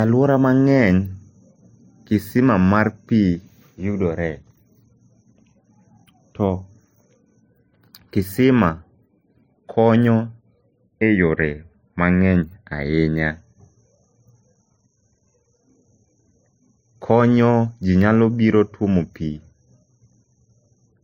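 Throughout this speech recording, nothing reaches above 16.6 kHz, and two different kinds of coding damage sit on top of each other. There is the artefacts of a low-rate HE-AAC encode and those of a low-rate MP3 heard together, which is what sets it apart from a single lossy encode. The likely cause is transcoding between lossy codecs: an HE-AAC encode near 40 kbit/s re-encoded to MP3 at a similar rate, each stage compounding the last.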